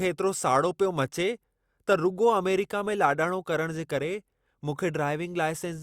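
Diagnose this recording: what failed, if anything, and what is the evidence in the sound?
No fault found in this recording.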